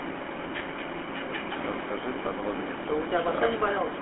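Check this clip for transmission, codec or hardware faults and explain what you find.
Yes, one fault runs through the whole recording. The speech sounds buzzy and gravelly, confined to roughly 200 Hz to 3.4 kHz. That points to the GSM full-rate codec, which fits a 13 kbps stream that rebuilds the voice from sparse pulse excitation.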